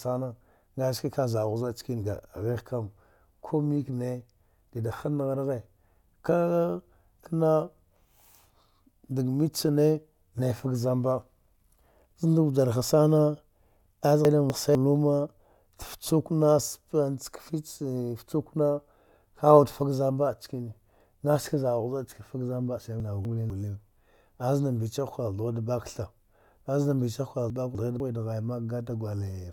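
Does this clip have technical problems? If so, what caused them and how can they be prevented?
Yes. Chunks out of order at 14.25–14.75 s, 23.0–23.5 s and 27.5–28.0 s: two 250 ms chunks play swapped, jumbling speech, with three hard joins. Prevent this by buffering and reordering chunks by sequence number or timestamp before playback or writing.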